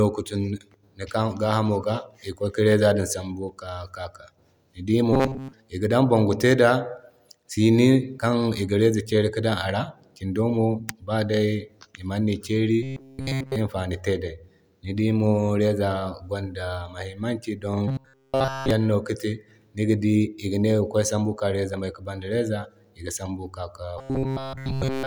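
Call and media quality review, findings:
Robotic sound from repeated short buffers at 5.13–5.53, 12.83–13.56, 17.88–18.71 and 23.99–25.07 s: rigid 133 Hz metallic buzz, likely the playout buffer looping roughly 7.5 ms chunks while real audio gets skipped.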